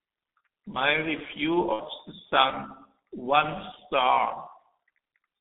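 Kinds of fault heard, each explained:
G.723.1 codec: The speech was squeezed through an early internet-telephony codec that models the voice in coarse 30 ms blocks at a rate that fits about 6.3 kbit/s, within a line band of 200 Hz to 3.6 kHz. The compression is heavy: the voice loses everything above 3.6 kHz and its low end below 200 Hz, so it sounds muffled and hoarse throughout, with smeared consonants and a rough, thin texture.
VoIP packet loss concealed by the speech codec: Between about 1.73 and 1.83 s, a stretch of audio never arrived. The missing span fits two lost 30 ms frames, about 60 ms. The decoder kept repeating its last pitch and vocal-tract shape while lowering the level, so that gap is bridged by a smeared, fading buzzy tone or coloured noise rather than silence. Because each frame is built on the one before, the voice stays weak or distorted for tens of milliseconds or more beyond the gap itself.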